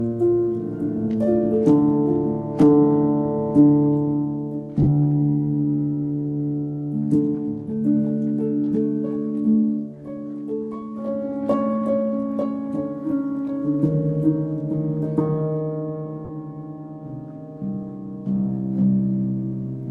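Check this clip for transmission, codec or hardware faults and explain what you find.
There is one transmission fault, heard twice. At 4.82 s and 16.25 s, lost LE Audio frames make the sound briefly smear into noise. The gaps, about 50 ms and 40 ms, suggest several 10 ms LC3 frames were dropped. The decoder refilled them by repeating the last spectrum with randomised signs, so the sound blurs for a moment rather than cutting out.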